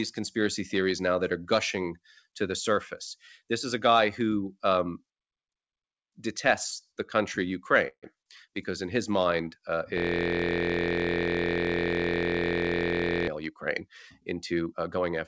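At 7.88 s there's a short call audio freeze, likely from packets stalling and the jitter buffer running dry. The last sound is stretched into a fading buzz for about 0.15 s, including a silent stretch of about 60 ms, then the speech picks up right where it left off.

From 9.98 to 13.28 s there's a system hang loop. The machine stalled while the audio hardware kept replaying one 23.22 ms chunk, which fits a 1024-sample buffer. It repeats well over a hundred times and comes out as a steady 43.1 Hz buzz.

Then from 14.20 to 15.11 s the jitter buffer speeds up to drain the backlog. It trims around a tenth of a second in small pitch-period snips, so the speech runs at about 112% speed at the same pitch and sounds noticeably rushed. Over the whole clip, the G.722 call path caps the band at 8 kHz.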